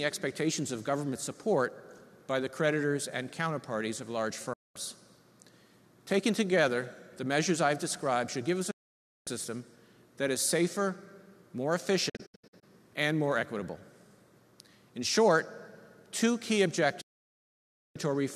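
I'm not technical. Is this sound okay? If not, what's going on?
No. This is a digital broadcast dropout: the receiver lost clean signal data and muted until it returned. The sound drops out at 4.53–4.76 s, 8.71–9.27 s and 17.01–17.96 s, with several short holes between 12.09 and 12.63 s. The missing sound is gone.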